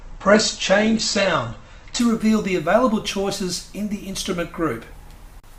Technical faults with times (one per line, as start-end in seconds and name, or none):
0.00-2.00 adaptive stream starting at a low bitrate